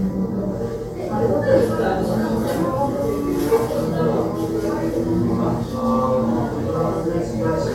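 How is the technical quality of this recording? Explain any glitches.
The technical quality is sound, with no glitches or other faults anywhere in the recording.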